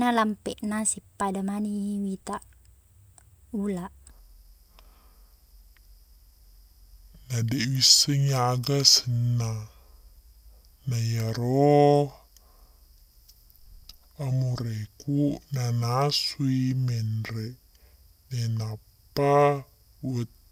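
From 4.10 s to the end, a section at the wrong speed plays at 0.625 times normal, likely from being fitted to a mismatched clock, so the speech drops about seven semitones and drags. On a spectrogram, harmonics and formants shift downward and stretch horizontally.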